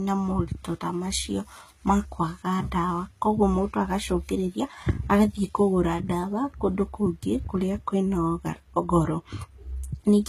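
Throughout the speech, the treble sounds bright but synthetic, with s sounds turning gritty and metallic. The likely cause is HE-AAC compression at a low bitrate, perhaps around 20 kbps, rebuilding the upper band from copied lower frequencies instead of coding it.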